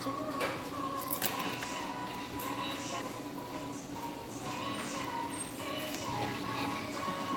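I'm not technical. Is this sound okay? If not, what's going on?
No. Between 4.93 and 6.48 seconds there is a jitter buffer speed-up. The audio arrived unevenly, and the receiving end stored more than it wanted to hold. To catch up, it repeatedly cut out tiny slivers of sound, removing roughly 150 milliseconds in total. As a result, that stretch plays about 10% faster than normal. The pitch doesn't change, but the sound feels briefly hurried and rushed before settling back.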